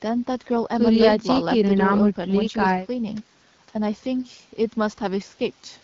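Nothing technical goes wrong in this speech clip; it carries the ordinary, mild coloring of AMR wideband (HD Voice) coding at 12.65 kbit/s, where the speech band is modeled up to 6.4 kHz and the top edge to 7 kHz is filled in with shaped noise.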